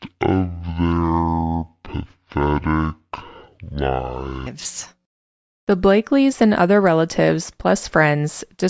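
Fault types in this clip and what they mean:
Wrong sample rate: from the start to about 4.47 s the voice is dragged out and deep, running at half speed and sitting a full octave (12 semitones) lower than it should. Speed and pitch drop together by the same factor of two because the samples are played back at half the rate they were captured at, with no conversion in between. That fits material recorded at 32 kHz being played out at 16 kHz.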